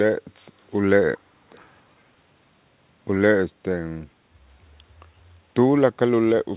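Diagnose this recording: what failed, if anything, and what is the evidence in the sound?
Call processing failed: an echo leak, twice, from 0.71 to 0.80 s and from 1.51 to 1.60 s. Each is a brief, faint copy of the speech trailing it by 340 ms, very low at first and somewhat stronger the second time. A fixed lag like this, with a copy arriving in scraps, is likely the far end's echo canceller letting loudspeaker pickup through. That separates it from room reverberation, which smears continuously rather than repeating at a set delay. The whole clip stops near 4 kHz, which fits a G.711 call path.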